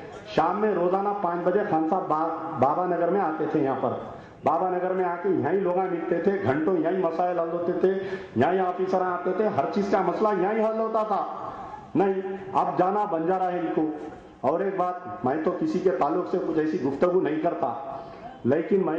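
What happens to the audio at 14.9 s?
Nothing goes wrong at 14.9 s; the audio runs through that moment intact, with no dropout, click or distortion.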